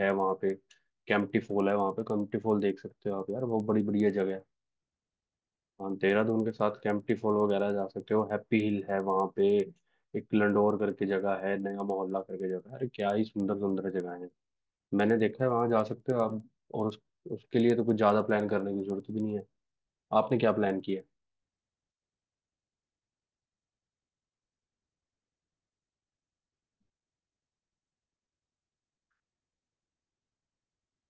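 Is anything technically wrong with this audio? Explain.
Yes. Throughout the speech there is a steady ticking at 10 per second, present only while sound is playing. This is a resampler restarted on every block: each 100 ms block was converted from 48 kHz to 16 kHz in isolation, leaving a small error at every block edge.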